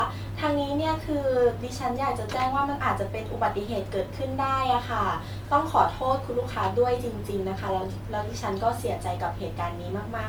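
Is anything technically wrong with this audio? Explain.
Yes. Generation loss runs throughout the speech: it sounds swirly, smeared and hollow, with blurred attacks and nothing above 19.9 kHz. The likely cause is repeated MP3 re-encoding, around ten passes, consistent with 128 kbit/s, each on a shifted frame grid, stacking quantisation noise and spectral holes.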